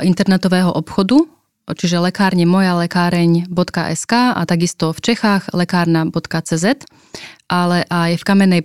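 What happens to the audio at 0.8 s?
Nothing goes wrong at 0.8 s; the speech plays through that moment intact, with no audible fault.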